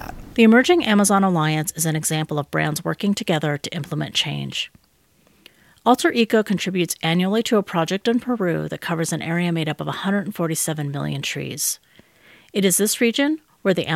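Nothing goes wrong anywhere in this bit of speech, so there's no fault to point to from the first moment to the last.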